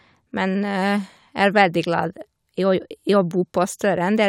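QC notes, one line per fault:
No technical faults are present, and the signal stays steady and intact across the whole recording.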